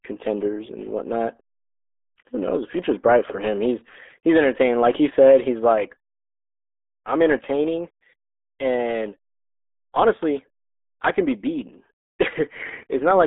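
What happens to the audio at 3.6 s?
At 3.6 s the sound is passing through the RealAudio 14.4 codec, and it does so for the entire clip, not just at that moment. This dial-up-era speech coder squeezes the signal into a very low data rate, consistent with about 8 kbit/s, by keeping only a crude model of the spectrum. The band is held to roughly 250 Hz to 3.5 kHz with nothing above 3.8 kHz, so the speech sounds muffled, thin and heavily gargled.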